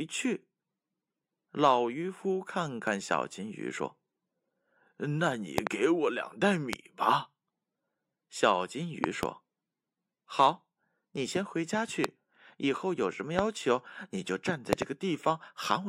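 Speech with loud pops: sharp clicks well above the voice, doubled at 5.58–5.69, 9.04–9.25 and 14.73–14.84 s, single at 6.73–6.75, 12.04–12.06 and 13.39–13.41 s. They are likely voltage spikes from a plug, switch or static.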